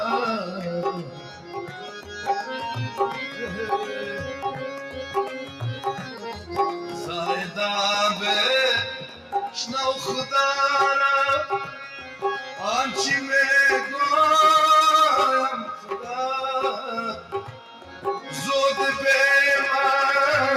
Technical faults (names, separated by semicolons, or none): noise suppressor applied to music or sounds; sound cut by the noise suppressor